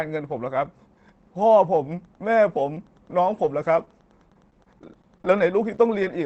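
From 1.97 s to the end, Wi-Fi interference sits about 45 dB below the speech: a faint, steady ticking roughly ten times a second, spaced 102.4 ms apart, as a nearby radio's beacon is rectified by the audio circuit. A spectrogram shows thin, evenly spaced vertical lines running the full height of the display.

At 3.43 s, a lost packet rebuilt from error correction replaces 10 ms of audio with the lower-bitrate copy carried in the following packet. There is no gap, but that instant sounds rougher and grainier. On a spectrogram it appears as a narrow patch of smeared, noisier texture.

From 3.85 to 3.88 s, a short concealed packet loss leaves 10 ms missing. The receiver extends the preceding sound across 18 ms and then crossfades back into the real audio. It is heard as a brief smear or wobble.

Repeated packet loss (robotic sound) runs from 4.30 to 6.06 s. Eleven separate gaps, the longest 21 ms, are each patched by continuing the last sound, adding up to 140 ms, or about 8% of that stretch. 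Around half is rebuilt from error-correction copies. The result is choppy, with pieces missing, and a spectrogram shows repeated short blocks of frozen, smeared harmonics.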